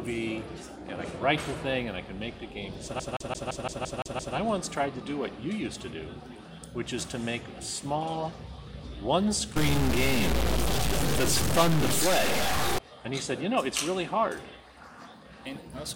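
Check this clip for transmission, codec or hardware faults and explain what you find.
Two faults are audible. The first is a CD stuck on one turn, from 3.00 to 4.36 s. A single slice of about 171 ms plays eight times in a row. A brief mute marks each restart. The cause is a scratch on the disc. At the same point on every rotation the laser loses its place and jumps back one track, replaying that slice. The result is a fast, regular stutter, the classic sound of a skipping CD.

The second fault runs from 9.56 to 12.79 s. The sound picks up errors with a pattern that tracks the waveform. Quiet gaps in this stretch fill with noise instead of falling silent. This is likely a stuck bit, where one data bit is held fixed by a broken line or converter. About half the sample values then land off by that bit's weight. Near zero, the error follows the signal's sign, which explains the noise in the pauses.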